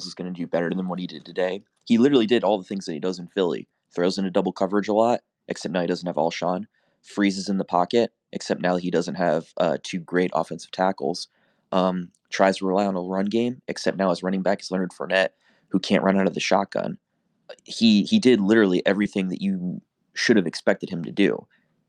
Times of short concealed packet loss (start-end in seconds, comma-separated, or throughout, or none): 19.03-19.07